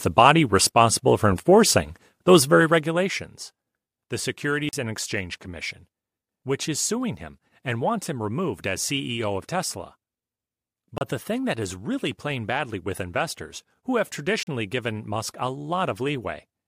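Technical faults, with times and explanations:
4.69–4.73 s, 10.98–11.01 s (just before "the thing that is") and 14.43–14.47 s (just after "with investors who have"): blocks of digital silence, 40, 30 and 40 ms long. The speech drops to silence and returns with no fade. The output buffer was likely not filled in time.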